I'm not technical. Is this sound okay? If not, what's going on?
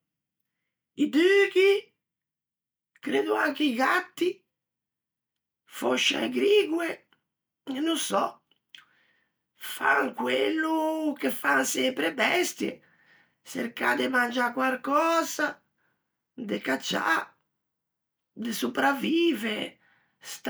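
Yes, nothing wrong turns up anywhere in this recording.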